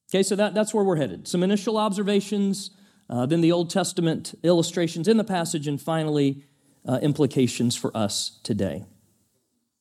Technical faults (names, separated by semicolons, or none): none